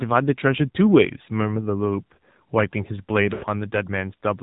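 From the first syllable the speech has that telltale AMR narrowband mobile codec sound: nothing above 4 kHz, and a buzzy, synthetic edge from the vocal tract model running on very few bits. It's plainly audible, which fits the low 7.4 kbps mode.

Then from 3.34 to 3.45 s you get lost AMR speech frames. About 80 ms went missing, which fits four dropped frames. The decoder stretches the last good pitch into a warbly, drawn-out smear that fades, then the speech comes back a bit weak and rough.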